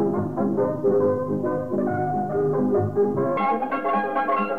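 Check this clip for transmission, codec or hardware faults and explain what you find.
One fault is present, confined to the final stretch of the clip. Audio read two samples at a time (double speed) runs from 3.37 s to 4.59 s, the end of the clip. The reader treated each pair of samples as a single frame, as if the stream held two channels or wider samples, so the sound plays at 2x speed and jumps a full 12 semitones, an octave, higher.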